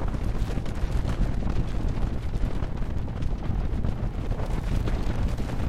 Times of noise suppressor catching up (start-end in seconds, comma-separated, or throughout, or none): none